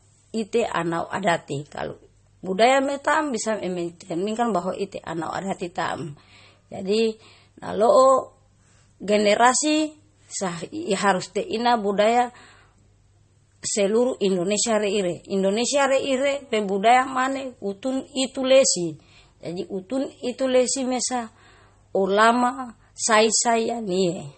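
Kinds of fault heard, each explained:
Transcoding between lossy codecs, throughout: the speech has nothing above 8.4 kHz and carries two different kinds of coding smear layered together. This is likely a second lossy pass, which fits HE-AAC near 40 kbit/s re-encoded as MP3 near 32 kbit/s, spending bits on earlier artefacts.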